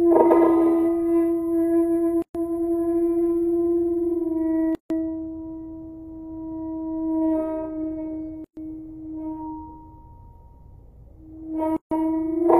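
At 2.22 s the sound stops dead for about 126 ms, and the same gap at a join of encoded pieces recurs at 4.75 s (about 152 ms), 8.44 s (about 127 ms) and 11.77 s (about 149 ms). Each piece was encoded on its own, so encoder start-up delay and final-frame padding sit as silence at every seam. Unlike a packet dropout, nothing is missing: the sound resumes exactly where it halted, and the abrupt edges are softened by the codec.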